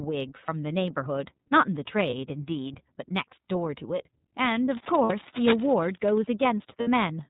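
The whole clip is speech passed through the iLBC codec, and the damage is plainly audible. Nothing above 4 kHz survives, so the voice sounds narrow and boxed in. Each frame is coded on its own, with no help from the frame before. That leaves a slightly rough, synthetic edge on every syllable. The coarseness fits iLBC's 30 ms frame mode at about 13.33 kbps.

The first lost iLBC frames fall at 0.45 to 0.49 s. The missing stretch points to one 30 ms frame. The decoder fills it by repeating the last pitch cycle mixed with noise. It sounds like a brief, held, faintly buzzy vowel. The voice snaps back right after, because the next frame stands alone.

From 4.64 to 6.18 s, a dense, uneven scratching rides over the speech. It sits only a little below the voice, so it is easy to hear. The likely cause is cable scratch noise: a worn cable or connector being moved, its contact resistance jumping around and adding bursts of noise.

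Inside that scratching, lost frames return at 5.03 to 5.11 s. This gap is about 60 ms long, which suggests two frames. The concealed stretch is a held, breathy tone before the voice recovers. The same fault appears again at 6.80 to 6.88 s. It is another 60 ms gap with the same buzzy, sustained fill, and clean recovery follows at once.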